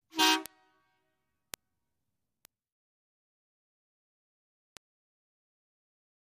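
Sharp, isolated ticks sound at 0.46, 1.54, 2.45 and 4.77 s, the first two peaking near about -11 dBFS and the later two softer, near about -23 dBFS. These are bit error spikes: a single flipped bit throws one to three samples off by a power of two before the waveform snaps back, producing a broadband click unrelated to the surrounding sound.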